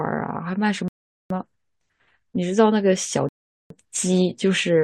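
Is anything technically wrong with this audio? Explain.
Yes. The speech twice cuts to silence in a rebuffering stall, at 0.88 to 1.30 s and again at 3.29 to 3.70 s. The player exhausted its downloaded audio and waited for more, so each gap adds about 0.42 s of silence before the speech resumes exactly where it stopped, with nothing lost.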